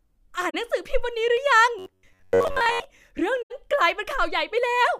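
At 0.50 to 0.55 s the speech drops into a brief silence of about 43 ms, and again at 3.43 to 3.51 s for about 85 ms. This is AAC frame loss with muting. The decoder zeroed the missing spectrum, which fits the loss of two frames and then four. The overlapping windows fade the sound out and back in, so each hole has soft edges. That separates it from a hard dropout or a splice.

From 1.79 to 2.85 s the speech turns into a rigid, metallic buzz fixed at 93.8 Hz. It still tracks the rough shape of the talking. This is robotic sound from repeated short buffers. The likely cause is audio arriving too slowly, so the player loops the last chunk of about 10.7 ms while most of the real audio is skipped. Unlike the muted frame losses, there is no silence. The gap is filled with a steady imposed pitch.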